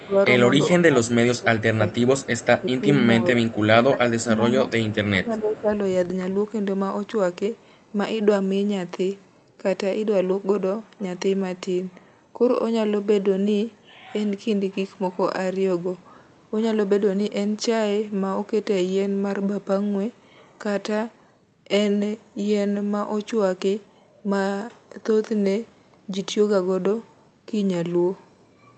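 From 0.00 to 0.15 s a faint echo leak appears: a delayed copy of the speech about 0.37 s behind and roughly 25 dB down, likely residual loudspeaker pickup that the far end's echo canceller failed to remove. It returns at 2.19–2.63 s and 4.68–4.95 s.

Overlapping this, speech is suppressed in double talk at 0.06–0.16 s and across 0.86–5.72 s. The level dips by around 15 dB in pieces totalling about 2 s, likely the echo canceller attenuating the near talker along with the echo. The top end stays capped near 8 kHz, which fits a wideband Opus call path.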